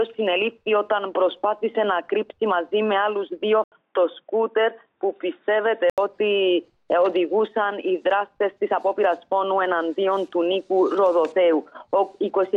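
At 3.64 s the sound drops out for 80 ms, then returns dull and boxy, with nothing above 3.7 kHz and a faint new background hiss sitting far below it. It stays that way until 5.98 s, when the full band returns. The likely cause is an input switched to a poorer device in mid-recording. A simple filter or codec change would not bring the brief gap or a noise floor of its own. The loudness, though, holds steady across both switches.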